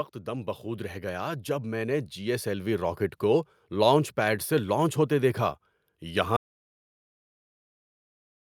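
From 0.24 s to 3.07 s the speech and the background noise swell together, climbing by about 9 dB before settling just ahead of "کو لانچ پیڈ سے". This is automatic gain rising: the gain control judged the input too quiet and raised its level gradually.

At 6.37 s the speech cuts off mid-flow into complete silence, with no room tone left, and it never returns before the clip ends. This audio dropout to silence is likely the input being lost while the recorder kept writing zeros.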